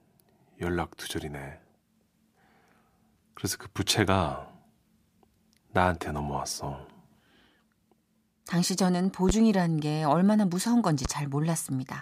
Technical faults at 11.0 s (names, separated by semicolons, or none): loud pop